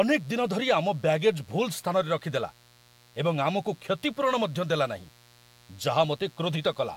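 Mains buzz runs under this speech from start to finish: switching spikes from a dimmer, rectifier or unshielded lead ride on the 60 Hz supply twice per cycle, spraying harmonics up into several kHz. The result is a steady, raspy buzz sitting roughly 30 dB below the voice.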